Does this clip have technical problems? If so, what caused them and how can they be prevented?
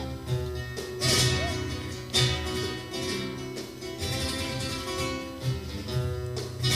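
Yes: USB whine at 1 kHz runs throughout, about 25 dB below the signal, from 1 ms USB frame current leaking through power or ground, seen as a steady horizontal spectrogram line. Prevent it with a powered hub, ground-loop isolator or better-shielded interface.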